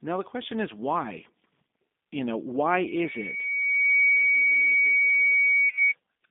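From the start, the speech has the G.729 codec sound. It is narrowband, roughly 200 Hz to 3.6 kHz. The sound fits an 8 kbit/s codec that rebuilds speech from a filter, pitch and a few pulses. The result is plainly rough and synthetic.

At 2.86 s a loudspeaker feedback squeal begins. The microphone is hearing its own loudspeaker, and the loop runs away at 2.2 kHz. The tone swells over roughly a second and a half. It sits about 5 dB above the speech and stops at 5.94 s.

From 5.69 to 5.73 s comes VoIP packet loss concealed by the speech codec. About 30 ms is missing, which points to a single lost packet. The decoder fills the gap by stretching the last sound. It is heard as a brief, fading smear.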